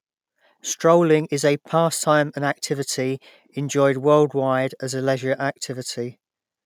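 No technical faults are audible.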